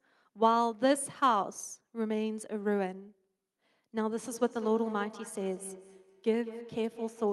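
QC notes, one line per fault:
4.26–7.33 s, feedback echo between two devices: a second nearby device replays the call, this microphone recaptures it, and its own echo canceller ignores it. The speech returns roughly every 200 ms as a thin, ringing copy, peaking about 15 dB below the speech.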